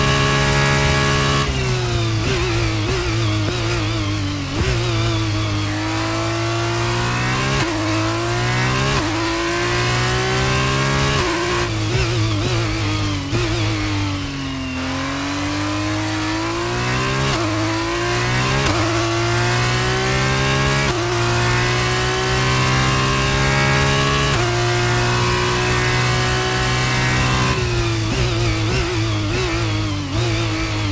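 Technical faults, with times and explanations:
No technical faults can be heard in this audio.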